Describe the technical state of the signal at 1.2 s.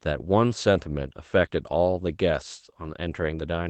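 At 1.2 s the speech signal is intact, with nothing wrong beyond the ordinary band-limited sound of the call path carrying it.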